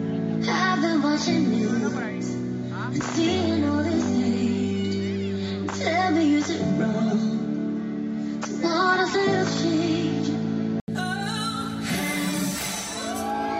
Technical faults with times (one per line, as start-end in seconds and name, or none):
0.00-10.88 input switched to a poorer device